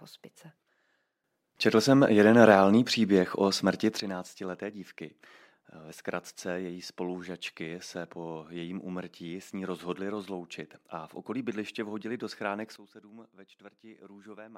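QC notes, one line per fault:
1.24 s to 4.00 s, sudden gain jump: the speech and the background noise both get about 12 dB louder in a single step, then fall back at 4.00 s. There is no fade between levels. The likely cause is a gain setting applied digitally without a ramp.
12.76 s to the end, sudden gain jump: just after "bydliště vhodili do schránek", the whole signal drops by about 15 dB at once and stays down. Speech and noise fall together.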